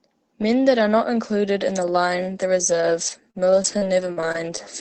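From about 2.55 s to 4.59 s the speech hits repeated packet loss, giving a robotic sound: seven short holes, the longest around 40 ms, each patched by stretching the previous sound. That gives choppy stretches with bits of speech missing, on top of a call codec's band-limited coding.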